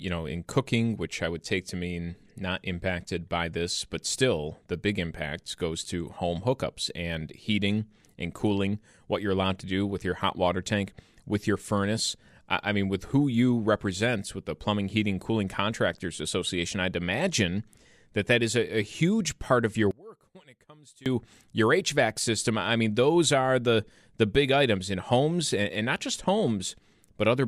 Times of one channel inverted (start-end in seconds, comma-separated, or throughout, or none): 19.91-21.06